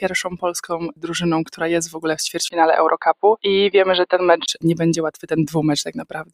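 A noise suppressor applied to music or sounds is active for the whole clip. It treats steady, held material as noise and keeps pulling it down. Onsets pass, but sustained parts and tails sink. The gain swings by roughly 10 dB, so the sound pumps and thins throughout.

Several passages are cut hard by the noise suppressor. The first falls at 0.27 to 0.44 s, dropping by about 15 dB. The next spans 0.73 to 1.11 s, at about 16 dB down. A third hits 1.86 to 2.05 s, about 14 dB down. Each time, held sound collapses briefly while sharper attacks survive.

From 2.48 to 4.48 s, the input likely switched to a poorer device. A gap of about 20 ms marks the change. After it, the band narrows, so the sound turns dull and boxy. A new noise floor appears, around 40 dB under the signal. The overall level stays about the same. At 4.48 s the fuller band returns.

Two more suppressor cuts follow. At 5.14 to 5.32 s the sound drops by about 13 dB. 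From 5.88 s to the end it sinks by about 16 dB.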